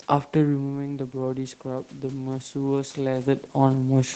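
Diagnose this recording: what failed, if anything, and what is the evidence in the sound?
Just after 0.5 s the speech drops, as when a talker leans away, and then from 0.55 s to 3.44 s the voice and the room noise swell together, recovering about 6 dB of the roughly 10 dB lost. This is automatic gain rising in the call's microphone processing: the gain control sensed a quieter input and raised its gain slowly over almost three seconds, so the background lifts along with the voice, with everything above 8 kHz already gone on the call path.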